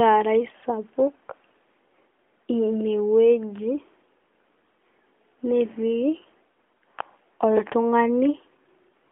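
Nothing here counts as a fault; the speech simply comes over an AMR-NB mobile link at 12.2 kbps, with the narrow 250 Hz to 3.5 kHz band you'd expect from that kind of call.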